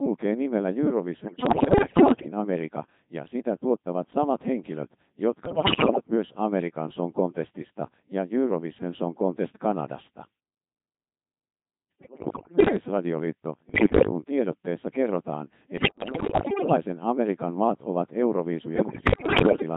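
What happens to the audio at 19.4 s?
Bit errors on digital voice radio hit at 19.4 s, inside a burst from 18.76 to 19.62 s. Roughly one bit in seven arrives flipped, and each bad bit scrambles a whole frame's pitch, loudness, voicing or spectral shape, so the synthetic voice lurches into warbles, bleeps and robotic gibberish.

Underneath, the Codec 2 vocoder runs throughout, with heavy damage consistent with its 2.4 kbit/s mode. Only pitch, voicing, energy and a spectral envelope survive, and the decoder rebuilds the speech from sine waves, so the voice sounds buzzy and mechanical.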